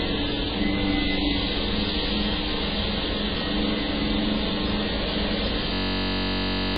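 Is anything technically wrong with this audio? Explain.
Yes, there are two faults.

Throughout, MP3 compression damage is heavy. Nothing reaches above 5 kHz, so the everyday sounds are dull, with watery, swirling texture and smeared attacks. This is likely a starved encoder cutting treble and dropping weak frequency lines frame to frame, which fits a very low bitrate around 16 kbps.

From 5.74 s to 6.76 s, a system hang loop takes over. The system froze while the sound hardware kept replaying one 21.33 ms piece of its ring buffer, consistent with a 1024-sample buffer. The piece repeats at 46.9 Hz, which sounds like a steady buzz, and it replaces about a second of real audio.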